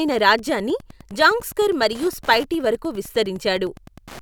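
Wi-Fi interference runs through the whole speech clip: a steady ticking at a little under ten clicks per second, set by a beacon every 102.4 ms. A nearby Wi-Fi radio's beacon pulses are being picked up and rectified by the audio circuit, sitting roughly 25 dB below the speech. On a spectrogram this appears as thin, evenly spaced vertical broadband lines; the waveform shows a regular train of small, sharp spikes, clearest in pauses.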